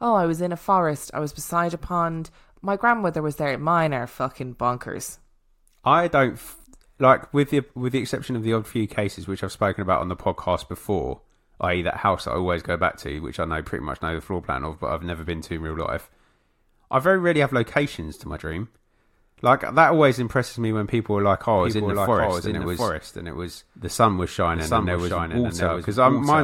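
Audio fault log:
21.58 s to end: doubled audio track. The speech is joined abruptly by a full-band copy trailing roughly 0.7 s behind and about 5 dB quieter, with no decay or room colour, likely from a second, slower capture path mixed in.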